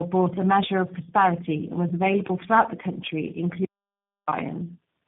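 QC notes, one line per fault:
throughout: tandem speech coding. The speech passes through three speech coders in a row. Each one re-codes the damage left by the one before. The sound is rough, muffled and warbly, worse than any single coder would leave it. Nothing is heard above 3.8 kHz. The texture fits a chain such as AMR-NB, then CVSD, then G.729A, joined by telephone-rate links.
3.65–4.27 s: audio dropout to silence. The sound cuts off abruptly and returns mid-flow. About 0.63 s is missing. The gap is silent with no room tone underneath. The audio in that span is simply gone. That points to the input being lost while the recording carried on writing silence, likely from a dropped link, disconnected device or brief mute.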